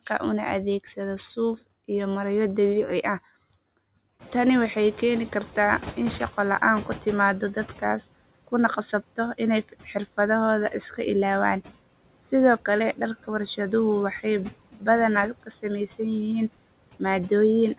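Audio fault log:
throughout: noise suppressor artifacts. Steady noise is cut by about 18 dB, so it sinks between phrases and swells under speech. Unlike a lag, this is constant.
4.19–7.84 s: noise suppressor catching up. Room noise jumps about 19 dB near 4 s. For 3.65 s it passes with only about 11 dB reduction, then sinks as the estimate adapts.
9.63–10.18 s, 14.73–14.87 s, 15.43–15.65 s: speech cut by the noise suppressor. Brief stretches, each around a tenth to a fifth of a second, drop by about 11, 14 and 16 dB. Here the speech itself is swallowed along with the background.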